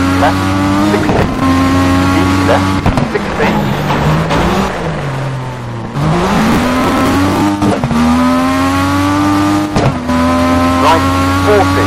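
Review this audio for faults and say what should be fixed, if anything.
Processor overload crackle occurs twice, from 1.14 to 1.42 s and from 6.35 to 7.41 s. In each stretch the processor misses its deadline for a run of short buffers, around ten milliseconds each, and the output repeats stale audio with hard edges at every miss. The result is gritty crackle riding on the sound. The first burst spans some fifteen missed buffers and the second about fifty, so the second is heard as a longer tearing passage. To prevent it, reduce processing load or raise the buffer size so every buffer completes on time.

Damaged data in a compressed stream appears at 4.30 s as a brief blip lasting about 14 milliseconds. Corrupted bytes in the encoded stream at that point cause the decoder to misread the affected frame and lose sync until it finds the next valid frame header. The misdecoded material comes out as a short disturbance rather than the intended signal. 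To prevent it, verify the file or stream integrity with checksums and re-encode or re-fetch the damaged section.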